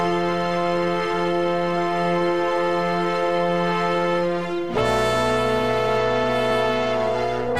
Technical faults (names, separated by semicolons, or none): GSM phone buzz